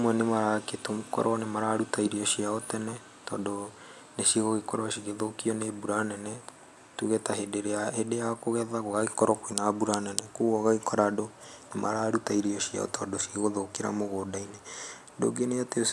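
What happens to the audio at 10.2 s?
Nothing goes wrong at 10.2 s; the speech carries on intact through that moment with no audible fault.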